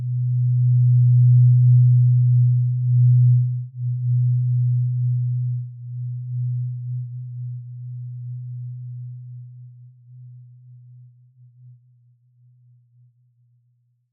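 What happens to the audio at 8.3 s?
Nothing goes wrong at 8.3 s; the audio plays through that moment intact, with no dropout, click or other fault.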